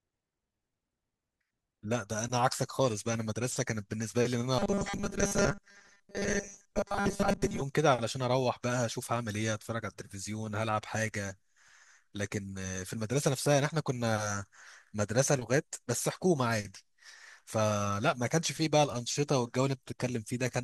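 Speech with robotic sound from repeated short buffers at 4.59–7.62 s: a fixed 200 Hz buzz, likely 5 ms chunks looping over skipped audio, unlike flanging's sweeping comb.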